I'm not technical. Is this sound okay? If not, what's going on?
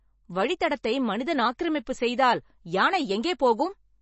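No. The recording was likely squeezed hard by MP3 compression, which throws away detail to save space. Throughout the speech, everything above about 7.9 kHz is gone, so it sounds dull, and the damage is plainly audible as a watery, swirling quality.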